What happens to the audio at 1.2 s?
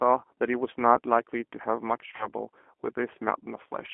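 At 1.2 s the speech carries the same G.729 codec damage present throughout the clip. The codec models each 10 ms frame with a vocal tract filter, a pitch predictor and a sparse set of pulses instead of the waveform itself, and the narrow line band runs from 250 Hz to 3.4 kHz. The result is a thin, slightly rough, synthetic quality, plainly audible and consistent with an 8 kbit/s rate.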